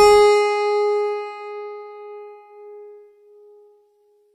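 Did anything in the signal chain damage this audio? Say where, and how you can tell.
Yes, at the codec stage: throughout, the top end sounds gritty and metallic and stops near 15.3 kHz. This is likely HE-AAC compression, with treble copied upward from lower bands, unlike a plain low-pass, and fits roughly 24 kbps.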